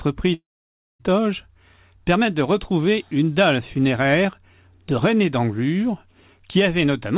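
This is a speech clip heard through a narrowband call path, with nothing above 4 kHz, which fits G.711 mu-law at 64 kbps. From 0.34 s to 1.01 s there is a long network dropout. About 0.66 s of audio is missing. The last sound is stretched into a fading buzz or hiss, then silence takes over for most of the gap. Speech resumes at 1.01 s with the lost part gone. The likely cause is packets that never arrived, concealed by the receiver.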